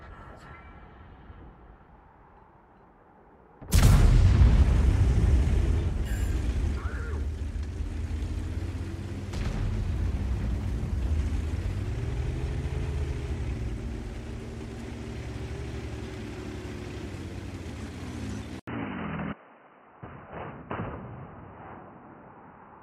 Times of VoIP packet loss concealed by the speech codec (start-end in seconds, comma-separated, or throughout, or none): none